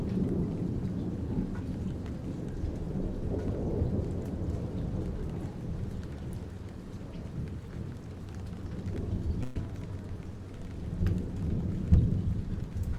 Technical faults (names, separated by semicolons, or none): burst of packet loss